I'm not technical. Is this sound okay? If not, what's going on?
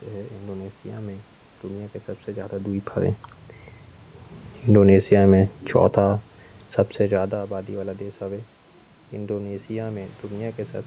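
No. From about 4.58 to 5.97 seconds the speech and the background noise sink together, as though someone slowly turned the volume down. This is automatic gain falling: the call's automatic volume control judged the input too loud and eased it down gradually.

Almost right away, from about 5.02 to 6.38 seconds, voice and background swell back up together, just before "सबसे ज़्यादा आबादी वाला". This is automatic gain rising: the same control now judged the sound too quiet and pushed the volume back up.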